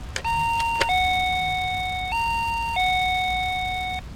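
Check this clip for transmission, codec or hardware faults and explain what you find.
One processing fault runs throughout these everyday sounds. Filter restarted on every block: the filter loses its state each 5 ms block, so each block begins with a transient, heard as a 200 Hz buzz that tracks the level.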